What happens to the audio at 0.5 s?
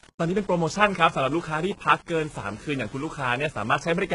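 At 0.5 s the speech carries the same two faults heard across the whole clip. The first is low bit depth without dither. Grainy distortion tracks the speech, sitting only about 25 dB below it. The grain fits the signal likely having been rounded to about 7 bits with no dither. The error follows the waveform, so quiet parts turn rough.

The second is HE-AAC compression, with heavy damage at this moment. Nothing reaches above 11 kHz. The treble present is rebuilt by copying lower bands upward, so s sounds turn lispy and metallic. The sound points to a low bitrate, near 12 kbps.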